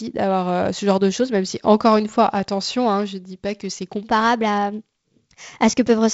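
A speech clip carried over a G.722 wideband telephone link, with content stopping near 7.7 kHz and the light lower-band noise that fits the 48 kbit/s mode. The fault is a section at the wrong speed. Right after "dis pas que c'est", at 4.04 s, the sound jumps to 1.13 times normal speed. It stays there to the end, at 6.13 s. Pitch rises with it, by about two semitones. The voice turns higher and hurried. The likely cause is that this part was played or edited against the wrong clock.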